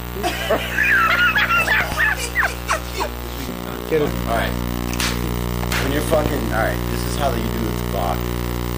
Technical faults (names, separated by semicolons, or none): loud pop